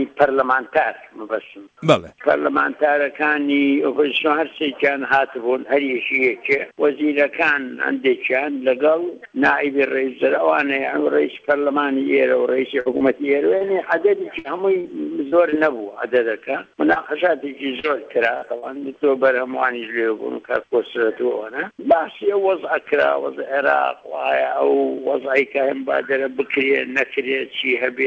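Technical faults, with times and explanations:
12.80–12.89 s, burst of packet loss: About 60 ms of audio never arrives, and the receiver bridges it by stretching the last sound for roughly 56 ms while turning it down, so a held buzz or fading hiss replaces the missing stretch before the signal picks up further on. On a spectrogram the harmonics or noise freeze into flat horizontal bands that dim toward the right. In the waveform the envelope decays smoothly, then jumps when real audio returns.
12.98–13.03 s, 13.57–13.64 s, 16.93–16.99 s, 17.80–17.86 s, 18.37–18.52 s and 18.59–18.65 s, short concealed packet loss: Each time about 30 ms is lost and patched with 23 to 42 ms of extrapolated sound cross-faded back into the real signal. The result is a brief smear or wobble. At 18.37 s about 8 ms is also dropped to catch up, which slightly tightens the timing. On a spectrogram each patch is a short smudge with blurred onsets below the 8 kHz ceiling of the G.722 path.
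14.39–15.55 s, repeated packet loss (robotic sound): Four separate losses arrive close together, totalling about 150 ms and with the longest about 59 ms. About 14 percent of this stretch is rebuilt from continued earlier sound, which makes it choppy, with pieces missing. On a spectrogram, repeated short flat-banded patches interrupt the normal pattern. The waveform shows uneven pulses, with sections that look copied and envelopes that break up irregularly.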